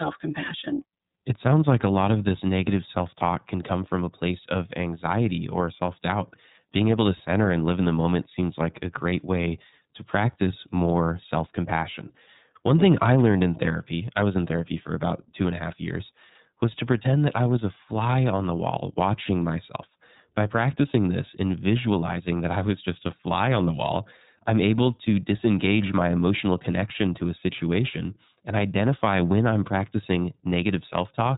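From start to finish the speech has passed through the iLBC codec, which fits its 13.33 kbps, 30 ms frame mode. Each frame's excitation is coded independently, and nothing above 4 kHz survives, so the voice sounds muffled, plainly rough and somewhat synthetic.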